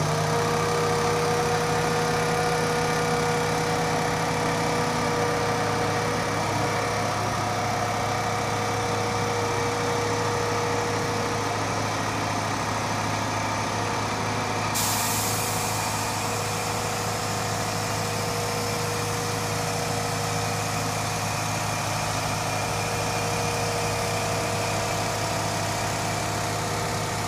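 No technical faults can be heard anywhere in the recording. Nothing in it drops out, clicks, distorts or breaks up at any point.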